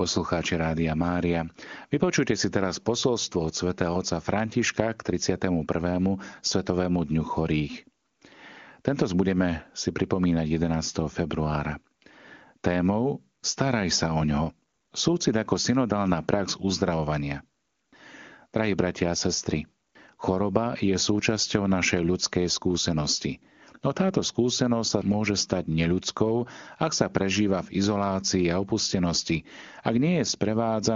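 Speech over an AMR-WB link, with no faults audible.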